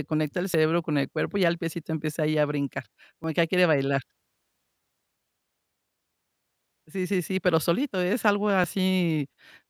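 A speech clip with three jumps at 0.54 s, 3.24 s and 8.64 s, where the sound jumps forward with no gap. Each skip loses roughly 20 ms, likely a dropped buffer (overrun), with unread input overwritten and the two edges spliced together.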